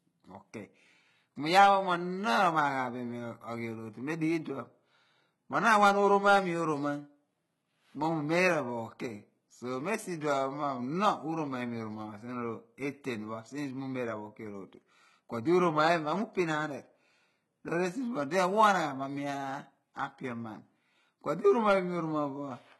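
From start to finish the speech has gritty, lispy s sounds and a metallic sheen in the treble, with nothing above 11.8 kHz. The treble does not match the lower harmonics. This heavy damage is likely HE-AAC compression rebuilding the treble from copied lower bands, which fits HE-AAC v2 at about 16 kbps.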